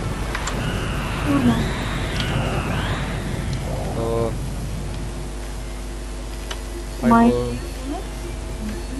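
Nothing stood out as a technical problem when listening to this audio.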